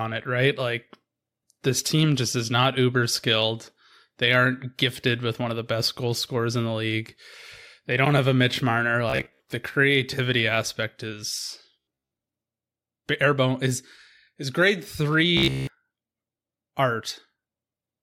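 Robotic sound from repeated short buffers appears at 9.1 to 9.4 s, 11.80 to 12.11 s and 15.37 to 15.67 s. Each time the speech hardens into a rigid, metallic buzz at 66.7 Hz that still roughly tracks the talking. That pitch fits a 15 ms chunk being replayed over and over, likely because fresh audio arrived too slowly. The first two stretches are mostly repeats, and the last is entirely repeated.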